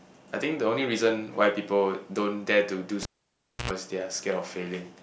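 At 3.03 s the speech is cut by a pop as a live cable is pulled and plugged in. The signal path is broken, so about 630 ms of near silence follows. While only the plug's tip touches the socket, a 90 ms burst of 60 Hz mains buzz leaks in. The contact is ungrounded, so hum enters directly. A second pop marks full reconnection, and the speech returns at 3.71 s.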